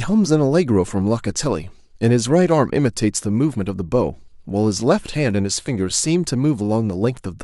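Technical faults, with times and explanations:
Nothing in the speech stood out as a technical fault on listening.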